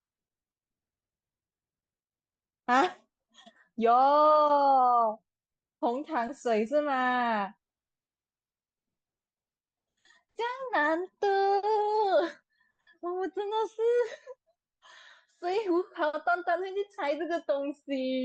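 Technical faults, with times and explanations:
0.0 to 2.0 s, adaptive stream starting at a low bitrate: the speech sounds dull and smeared, with thin or synthetic treble, then brightens abruptly with no gap. The player began on a low-quality rendition, consistent with roughly 24 kbit/s Opus, then switched to a richer one, around 64 kbit/s, after gauging the connection.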